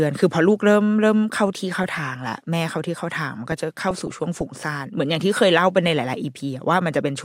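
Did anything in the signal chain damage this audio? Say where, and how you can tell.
Yes. From 1.55 to 2.26 s the speech has short blips of noise in single sub-bands: DAB burbling, where weak reception lets a small fraction of bit errors slip past error correction into MP2 frames, throwing individual sub-bands' levels around. Unlike network packet loss, nothing drops out or repeats.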